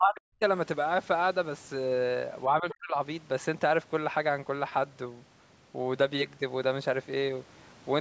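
A speech recording in which the talker's voice falls away sharply twice, at 0.00 to 0.44 s and again at 2.46 to 2.96 s, dropping by something like 40 dB for roughly 0.4 s each time. This is speech suppressed in double talk: the call's echo canceller likely heard both ends talking at once and turned everything down. Inside the second dip, from 2.70 to 2.74 s, a brief scrap of the other side's voice leaking through can be heard, around 15 dB below the talker, likely residual loudspeaker sound the echo canceller left in the microphone, with the call processing's band limit keeping everything under 8 kHz.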